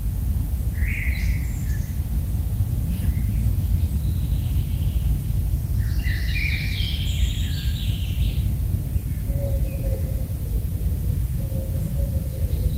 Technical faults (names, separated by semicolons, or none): none